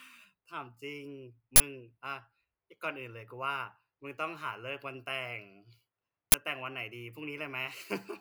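At 1.56 to 1.60 s and 6.32 to 6.34 s, an uninitialised buffer plays leftover memory as samples, giving loud 40 ms and 20 ms cracks or bursts of digital noise.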